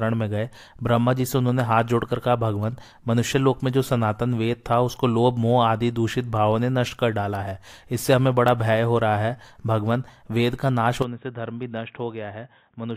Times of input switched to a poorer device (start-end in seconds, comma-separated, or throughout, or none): 11.02-12.97